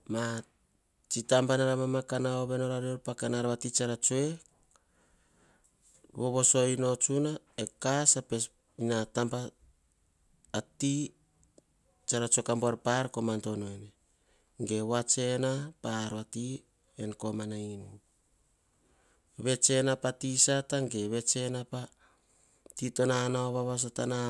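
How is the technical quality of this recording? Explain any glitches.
The technical quality of this recording is sound, with no glitches to explain.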